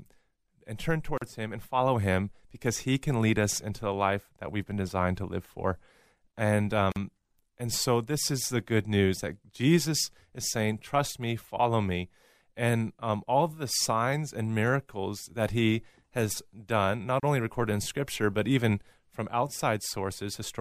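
The speech was encoded in separate pieces and joined without trimming, leaving a gap at each join of encoded pieces. Every encoder run contributed its start-up delay and padded final frame, so short silences open at 1.18 s (about 40 ms), 6.92 s (about 44 ms) and 17.20 s (about 31 ms). Each is a sudden dropout with smeared edges, after which the speech resumes exactly where it broke off.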